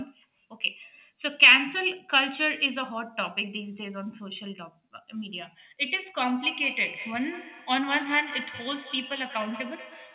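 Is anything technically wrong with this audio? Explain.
Yes. From 6.43 s to the end at 10.14 s there is feedback echo between two devices. A second device in the room replays the call into a microphone whose echo canceller only removes its own playback. Each word returns roughly every fifth of a second, thinner and ringing, at most about 12 dB below the speech.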